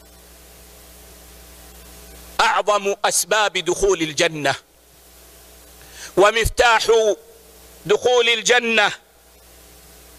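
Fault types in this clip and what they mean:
No technical faults can be heard anywhere in the clip. Nothing in the audio calls for an entry of any kind here.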